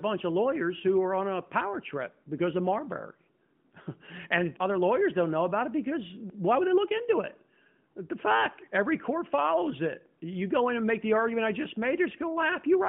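There are no technical faults to describe at any point in this speech recording.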